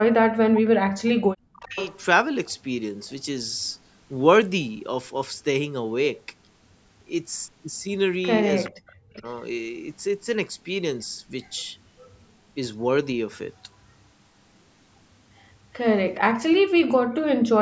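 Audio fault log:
0.0–1.78 s and 8.69–9.25 s, speech suppressed in double talk: the speech sinks sharply and breaks into fragments, at its deepest about 40 dB down, for roughly a second and a half in the first stretch and half a second in the second. Both sides were likely talking at once, and the echo canceller, unable to tell the near talker from loudspeaker echo, pulled everything down together.
1.06–2.54 s, 3.66–3.73 s, 8.64–9.22 s, 11.42–12.13 s and 16.14–16.59 s, echo leak: a faint delayed copy of the speech trails about 0.41 s behind. It is loudest, about 20 dB under the speech, at 1.06 s and 8.64 s, and barely audible at about 40 dB down at 3.66 s. The likely cause is a loudspeaker on one side of the call whose echo canceller let part of the microphone pickup through and sent it back.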